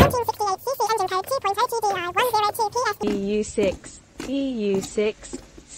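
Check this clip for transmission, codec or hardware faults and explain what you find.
One fault is present. From 0.0 to 3.03 s, audio is read two samples at a time (double speed): sample pairs become single frames, so the sound runs twice as fast and an octave higher.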